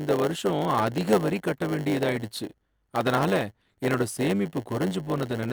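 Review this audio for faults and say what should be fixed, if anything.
A block size mismatch (padded) runs throughout the speech: zero-filled gaps in every block make a steady 100 Hz buzz and slow it to 0.919 times normal speed. Unlike a sample-rate error, timbre stays normal. Match the block sizes between the writing and reading stages.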